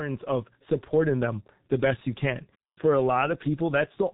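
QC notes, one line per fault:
Throughout: G.723.1 codec. The speech is band-limited with nothing above about 3.8 kHz, so sibilants and fricatives lose their high-frequency energy and consonants blur together. Heavy coding damage leaves a muffled, hoarse quality: the codec works in long frames and refreshes its model of the vocal tract only slowly, so rapid articulation is smeared and voicing sounds rough. The degree of damage fits a very low bitrate of roughly 6 kbit/s.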